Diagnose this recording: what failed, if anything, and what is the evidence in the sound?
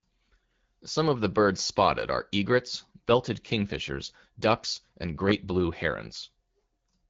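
Nothing in this recording has failed: the speech arrives through an AMR wideband (HD Voice) codec path at 12.65 kbit/s and stays clear, carrying only the light coding character expected at that rate.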